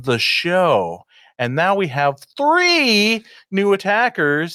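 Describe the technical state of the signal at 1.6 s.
At 1.6 s the speech signal is intact, with no dropout, clipping, glitch or other fault to be heard at that moment.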